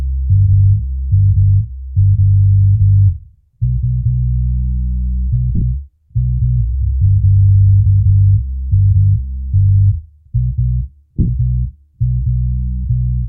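Lost LE Audio frames break up this everyday-sound recording at 5.55 to 5.62 s and again at 11.17 to 11.29 s. In the first, about 45 ms goes missing across 60 ms, with the longest gap around 40 ms. In the second, about 82.5 ms is lost across 120 ms, with the longest run roughly 30 ms. During each gap the LC3 decoder repeats the last spectrum with random signs, so tonal sound becomes a noisy smear.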